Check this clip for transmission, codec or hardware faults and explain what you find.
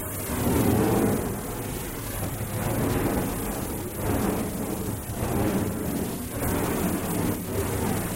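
Nothing wrong can be heard anywhere in this audio.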